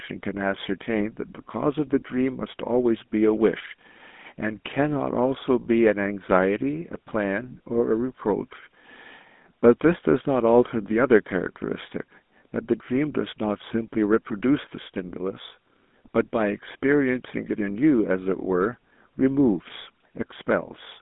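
Throughout the speech, a GSM full-rate codec is plainly audible. The sound fits a 13 kbps GSM full-rate channel. The vocal tract is modelled and driven by coarse pulses, giving a buzzy, gravelly roughness. The band runs from 200 Hz to 3.6 kHz. Nothing passes above 3.8 kHz.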